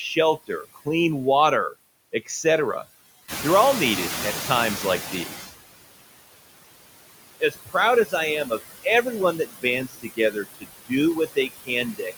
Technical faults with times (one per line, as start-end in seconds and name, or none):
0.00-12.17 noise suppressor artifacts
0.47-0.87 speech cut by the noise suppressor
3.28-5.47 noise suppressor catching up
7.40-7.75 speech cut by the noise suppressor
9.88-10.68 speech cut by the noise suppressor
11.27-11.70 speech cut by the noise suppressor